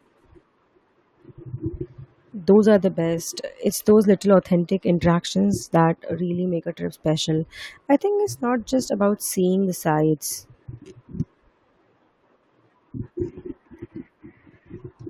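A recording of speech, with no technical faults to report. Nothing in what can be heard points to a problem anywhere in the recording or transmission chain.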